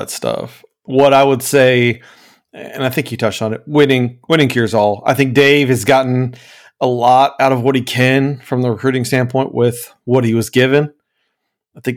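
Hard clipping appears at 0.99–1.89 s, 3.79–3.94 s after "you touched on it", 4.32–5.95 s, 6.84–8.17 s before "from the", and 10.14–10.17 s before "he was". Peaks overdriven by about 2–6 dB are sliced flat, adding crackly upper harmonics only on loud moments rather than the smooth, constant warmth of soft saturation.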